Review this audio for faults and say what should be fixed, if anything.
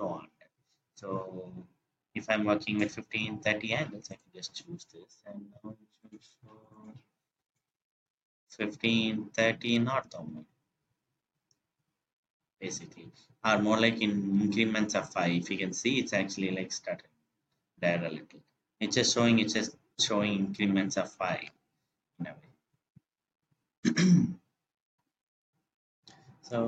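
At 11.59 s there is a brief glitch from damaged data in a compressed stream. Corrupted bytes reach the decoder there. It misreads the affected frame, loses sync, and resumes at the next valid frame header. To prevent it, verify the stream's integrity with checksums and re-fetch any corrupted segment before decoding.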